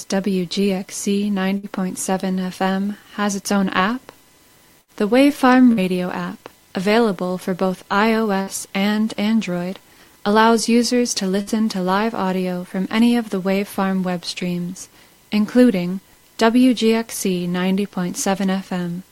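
A burst of packet loss occurs five times, at 1.57–1.66 s, 4.81–4.91 s, 5.72–5.80 s, 8.41–8.50 s and 11.41–11.50 s. In each, roughly 60 ms of audio never arrives in time. The receiver covers the hole for 56 to 66 ms by extending the preceding sound and fading it, heard as a brief held buzz or dying hiss. Playback then picks up about 60 ms later, so that stretch of audio is simply missing.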